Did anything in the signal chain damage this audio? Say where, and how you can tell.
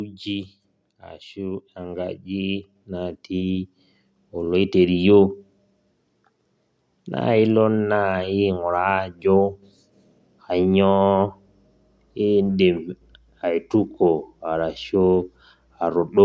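Yes. The damage happens in the call processing stage, where the automatic gain rising fault appears. From 0.23 s to 5.09 s, the speech and the background noise grow louder together. They climb by about 11 dB over almost five seconds. The AGC judged the input too quiet and kept raising its gain slowly. That is why the floor lifts with the voice. A louder talker would raise only the voice. The bass roll-off and the empty band above 8 kHz fit normal call microphone processing.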